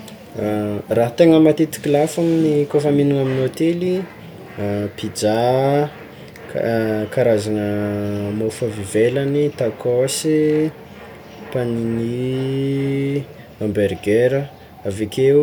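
No technical faults are audible.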